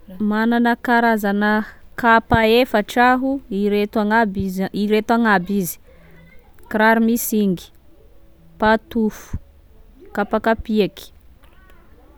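No technical faults are audible anywhere in the speech.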